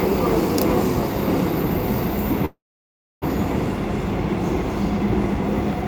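Packets were most likely held up in transit, letting the jitter buffer run dry: a call audio freeze from 2.45 to 3.24 s. The receiver stretches the last sound into a brief fading buzz, then holds near silence for about 0.65 s. When the audio resumes, it picks up where it stopped, with nothing lost, but everything after arrives about 0.76 s later than before.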